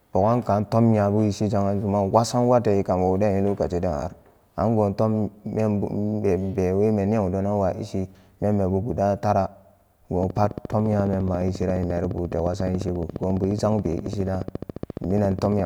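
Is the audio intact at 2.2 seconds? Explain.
Yes, at 2.2 seconds the speech plays through intact, with no dropout, click, distortion or other fault.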